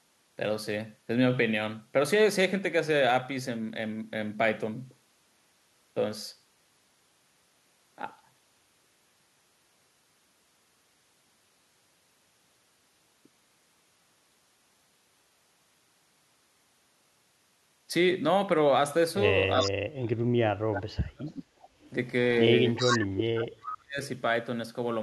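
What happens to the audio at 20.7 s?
At 20.7 s the speech is being pushed down. From 19.61 to 21.36 s it dips, about one and a half seconds in all, falling as far as roughly 40 dB at its deepest. This is likely speech suppressed in double talk. Both sides spoke at once. The echo canceller could not tell this talker from its loudspeaker echo, so it turned everything down.

Inside that span, from 20.73 to 20.82 s, a short scrap of delayed speech breaks through. It trails the original by 378 ms and sits about 10 dB below it. This is likely echo leak. One side plays the call on a loudspeaker, and its echo canceller missed part of what its microphone caught, so a brief copy came back down the line.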